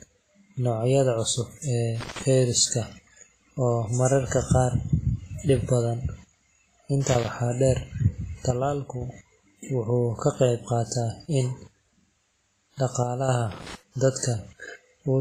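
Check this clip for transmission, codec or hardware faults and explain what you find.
There are three kinds of fault here: codec damage throughout, three bursts of crackle, and two short level dips.

The whole clip has heavy coding damage, likely from WMA compression. The transform codec's quantisation noise smears across long blocks, so the speech rings and sounds washy, with hiss breathing along with it. Nothing sits above 15.4 kHz, which fits a low bitrate around 24 kbps.

Loose connector crackle shows up at 2.01 to 2.23 s, 7.07 to 7.28 s and 13.52 to 13.75 s. Each time it's an irregular burst of scratchy crackle, the sort you get when a worn or dirty contact keeps making and breaking, chopping the signal up as it goes.

From 8.51 to 9.01 s and again from 13.03 to 13.29 s, the level drops abruptly by about 6 dB and comes straight back. That's likely one channel dropping out. With the same sound in both channels, losing one halves the mono sum without changing anything else.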